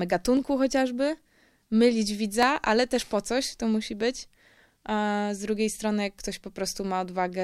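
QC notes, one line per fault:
0.37 s, 2.43 s, 3.42 s: dropped samples, heard as three isolated sharp clicks just before "chociażby mylić", "ale też po" and "to musi być". Each is likely a loss of under a millisecond of samples. The waveform steps abruptly to a later value, and the spectrogram shows a thin vertical line spanning all frequencies.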